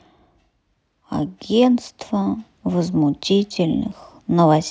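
No technical faults can be heard anywhere in the speech.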